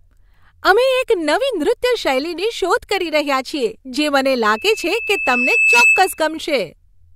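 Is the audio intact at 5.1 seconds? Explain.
No: loudspeaker feedback squeal runs from 4.44 to 6.27 s. The microphone re-amplifies its own loudspeaker until a 2.6 kHz tone gradually swells above the speech.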